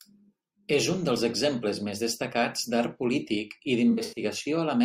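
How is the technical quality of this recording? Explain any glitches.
The recording has one glitch, an AAC frame loss with concealment, from 3.91 to 4.22 s, just after "destacats d’art polític i". For about a third of a second the speech turns smeared, hazy and phasey. Roughly 170 ms of audio went missing across that span, consistent with around eight dropped AAC frames, the longest unbroken run about a tenth of a second. The decoder papered over each hole by reusing the last good spectrum with randomised detail, which is the source of the washed-out, noisy texture.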